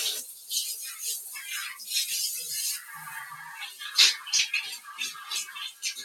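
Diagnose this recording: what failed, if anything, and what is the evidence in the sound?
A speech noise suppressor left running on non-speech audio is the failure, a call-processing stage rather than the codec or network. Across the whole clip the level breathes by around 10 dB as the processor keeps reclassifying steady parts of the sound as background noise and pulling them down, then releasing. Sharp onsets mostly pass untouched while sustained parts and tails sink. Dropouts in a network or buffer would silence everything at once, whatever its character.

Sound cut by the noise suppressor shows at two points. From 0.24 to 0.51 s the sound dips by about 7 dB, and from 1.21 to 1.41 s another sinks by about 5 dB. These are partial, smooth attenuations that follow the sound's steadiness. Packet loss or clipping would instead leave gaps, repeats or hard distortion rather than a graded fade.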